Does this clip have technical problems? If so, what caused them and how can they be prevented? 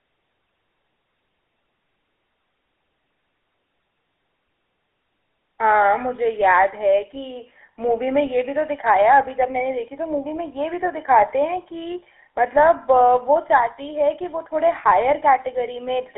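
Yes, GSM full-rate codec damage runs throughout: buzzy, gravelly speech squeezed into roughly 300 Hz to 3.4 kHz, consistent with the old 13 kbps pulse-excited coder. Prevent it by recording locally or using a wideband codec.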